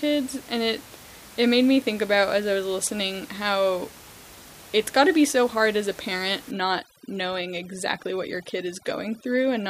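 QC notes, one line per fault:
6.51–9.70 s, overdone noise removal: overly strong noise reduction shuts off single bands near its noise estimate, so room noise about 22 dB down drops and breaks up into twinkling specks and quiet parts of the speech go with it; spectrogram shows isolated dots and ragged, holed harmonics.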